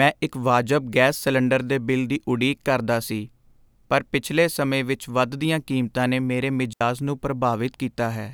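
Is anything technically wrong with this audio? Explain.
Yes. At 6.73 s the speech drops into a clean hole of near silence lasting about 78 ms, ending at 6.81 s, with no noise burst either side. This is a digital wireless dropout: the radio link lost too much data, so the receiver briefly muted behind a very short fade.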